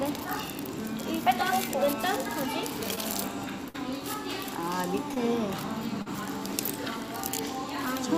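At 2.95 to 2.99 s there is short concealed packet loss. About 20 ms of audio arrived too late to decode. The receiver extended the preceding sound to cover it, then blended back. It is heard as a brief smear.

From 3.69 to 3.76 s comes a burst of packet loss. About 60 ms went missing in a row. The last sound was stretched and faded as the gap ran on. It becomes a dying buzz or hiss, and the audio resumes slightly further along.

The same short concealed loss returns at 5.14 to 5.18 s and at 6.02 to 6.08 s. The second spans about 40 ms, so its wobble is longer.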